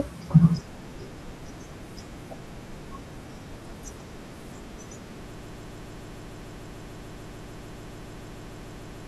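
A speech clip with a broken-record loop starting at 5.35 s. From there the sound stops moving forward. A fragment of about 147 ms repeats exactly, back to back, about 25 times. It runs right to the end of the clip and never recovers. Whatever speech should have followed 5.35 s is missing. The likely cause is a player, encoder or stream that stalled and kept sending the last short piece it held.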